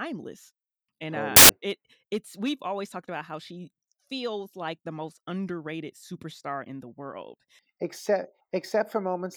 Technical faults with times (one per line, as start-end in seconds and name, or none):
1.36-1.49 samples built from the wrong bytes